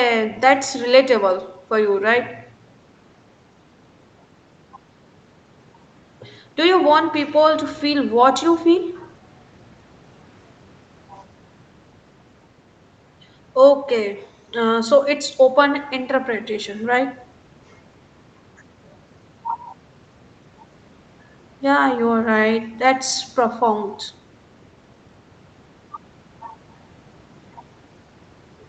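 Speech here shows no technical faults, with nothing above 8 kHz, which fits normal call microphone processing and a WebRTC call path whose codec limits the band at that point.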